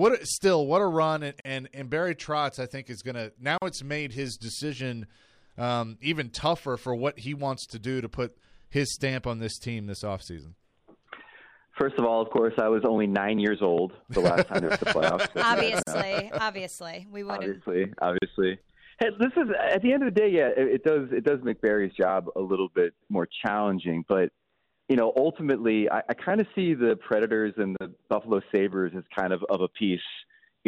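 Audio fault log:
1.40–1.45, 3.58–3.62, 15.83–15.87 and 18.18–18.22 s: gap at a join of encoded pieces. Silences of 46, 41, 43 and 39 ms appear where separately encoded pieces were joined untrimmed, leaving encoder delay and padding. Each shows as a narrow blank column with smeared edges, and the sound resumes where it stopped.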